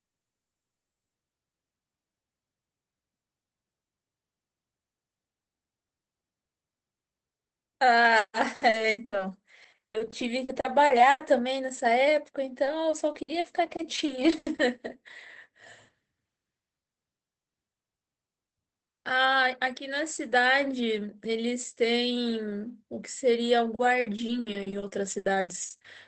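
Repeated packet loss (robotic sound) appears from 8.07 to 11.28 s, again from 12.64 to 14.60 s, and from 24.00 to 25.86 s. Packets kept arriving lost or late, and each hole was bridged by extending the preceding sound. Dropouts of up to 100 ms, then 80 ms, recur closely enough to make the speech choppy, with roughly a sixth to a quarter of each stretch patched. The call codec's narrowed top end, consistent with Opus band-limited near 8 kHz, is present throughout.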